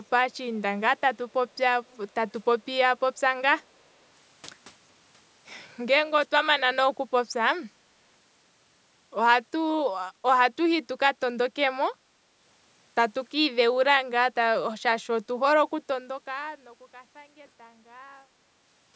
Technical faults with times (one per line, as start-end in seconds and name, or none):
1.88-1.97 echo leak